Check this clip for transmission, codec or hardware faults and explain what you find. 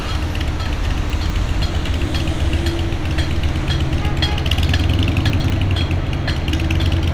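Two faults of the same kind are audible, both chunks out of order. At 1.1–1.3 s and again at 5.3–5.5 s, a 100 ms chunk plays one slot late, after the chunk that should follow it. The audio jumbles briefly at the hard joins. Unlike a dropout or stutter, nothing is missing or repeated. The pieces are only swapped.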